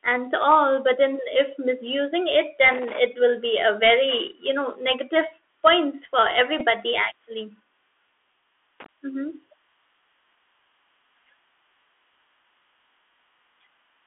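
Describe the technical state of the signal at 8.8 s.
Around 8.80 to 8.86 s there's a short burst of loose connector crackle, about 60 ms of irregular scratchy chatter. That's a worn or dirty contact making and breaking as it shifts, chopping the signal on and off and throwing in little pops where the line jumps.

Underneath that, the whole moment is still going through the Bluetooth CVSD headset codec. Everything sits between roughly 250 Hz and 3.4 kHz, which fits a 64 kbps CVSD stream. The one-bit up/down stepping leaves a granular hiss, scratchy s sounds and plainly audible grit.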